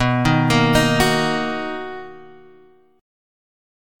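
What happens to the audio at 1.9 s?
Nothing goes wrong at 1.9 s; the audio plays through that moment intact, with no dropout, click or other fault.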